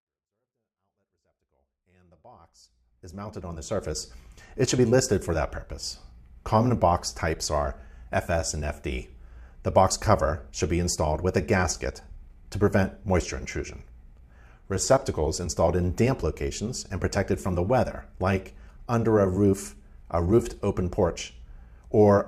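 Nothing stood out on listening; the audio opens with a smooth fade in that brings the level up gently from the very beginning to about 4.04 s.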